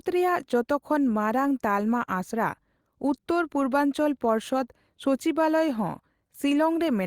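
Nothing goes wrong anywhere in this bit of speech, so there's nothing to point to.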